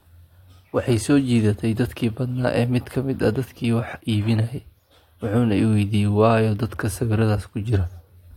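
No technical faults can be heard anywhere in this speech recording.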